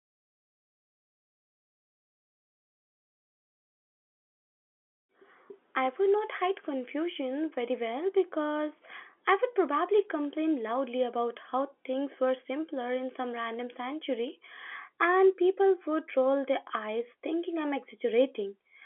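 Nothing goes wrong anywhere in this speech, which comes over the ordinary G.711 telephone line with its usual narrow band of roughly 300 Hz to 3.4 kHz and nothing out of place along the way.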